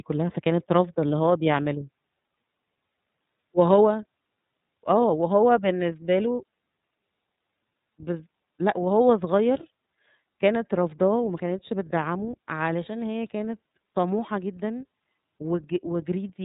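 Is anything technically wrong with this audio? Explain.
Yes. Throughout the speech, the iLBC codec is plainly audible. Nothing passes above 4 kHz, so the sound is dull and narrow. Each frame is coded independently; here the frames are 30 ms at 13.33 kbps. That leaves voices rough and slightly synthetic.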